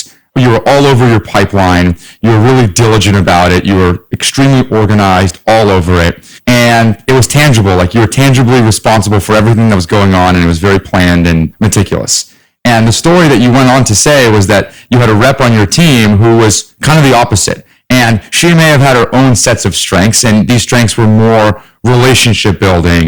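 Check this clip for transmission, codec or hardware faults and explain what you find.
Hard clipping runs through the whole speech clip. Throughout, a gain stage is overdriven by about 19 dB, flattening nearly a third of the waveform and producing a harsh fuzz on every loud sound.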